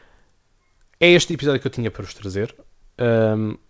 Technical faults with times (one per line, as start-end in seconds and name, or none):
1.31 short concealed packet loss